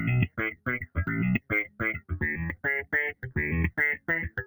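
A noise suppressor built for speech runs across the whole clip and is applied to sounds it wasn't designed for. It treats steady content as noise. Level swings by around 15 dB. Held parts sink while attacks pass, so the sound pumps and thins.

The sound is cut by the noise suppressor at three points. From 0.28 to 0.97 s and from 1.39 to 2.11 s, it drops by about 16 dB. From 3.12 to 3.38 s, it drops by about 15 dB. Sustained parts and decays dip or are cut short.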